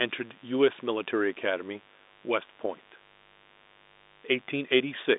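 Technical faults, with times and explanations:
Throughout: mains buzz, a steady, raspy 50 Hz buzz roughly 30 dB below the speech. Sharp switching spikes twice per mains cycle pile up harmonics, so it rasps instead of humming smoothly like a pure tone. The telephone band stops them near 3.8 kHz.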